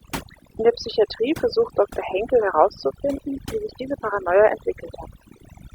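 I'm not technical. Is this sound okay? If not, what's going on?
No. This speech recording has overdone noise removal, and it runs through the whole clip. A cleanup tool meant to strip out background hiss was pushed too hard, so it deletes narrow slices of sound whenever they resemble the noise. The softer parts of the voice get caught and removed too. You hear the background drop and break up into twinkling, warbling specks.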